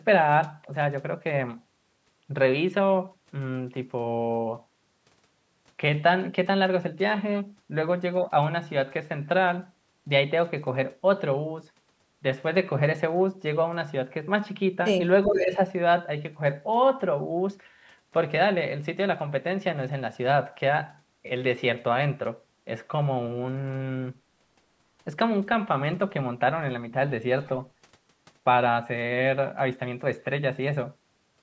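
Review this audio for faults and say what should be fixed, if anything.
Speech suppressed in double talk, 15.26 to 15.59 s: the sound dips by about 10 dB over roughly a third of a second. This is likely the echo canceller turning down the near talker because it couldn't tell that voice apart from the loudspeaker echo while both sides spoke.

Echo leak, 15.52 to 15.56 s: a brief, faint scrap of the voice returns about 420 ms late, well below the live speech. An echo canceller likely failed to remove all of the loudspeaker sound its microphone picked up, so a fragment was sent back.

To prevent both, use a headset or a better-tuned double-talk-capable echo canceller so that overlapping speech is neither ducked nor leaked back.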